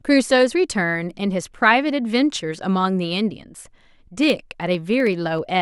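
Speech, with periodic USB or driver dropouts from 4.24 to 5.51 s: about twenty tiny skips, a fraction of a millisecond each, ticking every 64 ms.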